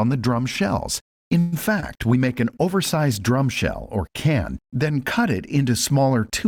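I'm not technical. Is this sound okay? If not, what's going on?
No. There are three separate problems, all typical of an internet call.

At 1.39 s the sound stalls until 1.54 s. This is a call audio freeze. The likely cause is that parts of the call were held up on their way to you. While waiting, your end keeps the last sound going as a fading buzz for about an eighth of a second. Then the audio carries on where it stopped. Nothing is lost, but everything after arrives a little later.

Between 1.80 and 1.98 s there is short concealed packet loss. A tiny piece of the sound, about two hundredths of a second, never arrived. Your end covers the hole by stretching the sound just before it, then blends back into the real audio. You hear a brief smear or wobble rather than a gap. Anything that short in the hole is simply gone.

From 2.29 s to 4.91 s there is a call bitrate drop. The connection seemed to get worse, so the sound was squeezed into far less data. 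It turns rough and muffled, with the crisp top end cut away. It is at its worst for about one second of that stretch. After 4.91 s the quality comes back.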